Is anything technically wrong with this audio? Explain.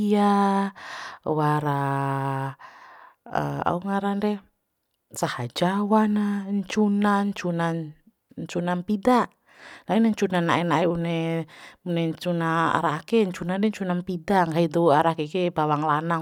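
No, nothing is technically wrong.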